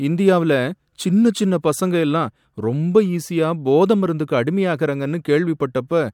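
Listening through the speech recording, nothing stood out as a technical problem at any point.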